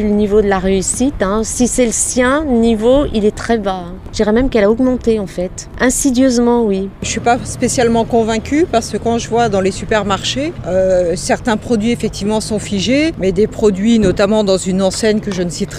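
Listening through the recording, nothing stood out as a technical problem at any point.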